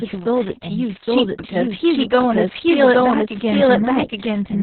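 From the very start, the speech carries a doubled audio track. A second full-band copy runs about 0.7 s behind the first. It sits at about the same level, so neither copy dominates. There is no decay or room colour on it. It is a clean repeat. The likely cause is the same audio being captured a second time through a slower path and mixed back in.

Opus voice compression also runs through the whole clip. The sound is narrowband, with nothing above about 4.2 kHz. The SILK speech coder is doing the work, and the damage is heavy. The excitation is coded coarsely. The speech comes out muffled, hoarse and slightly robotic. That fits a very low bitrate near 6 kbps and long 60 ms frames. The delayed copy suffers the same dulling.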